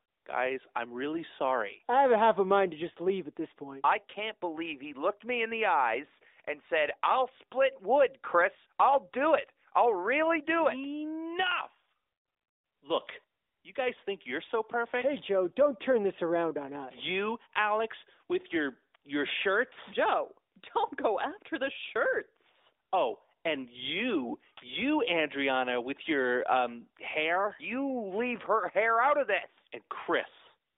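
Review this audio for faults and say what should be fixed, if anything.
No faults found, nothing needs fixing.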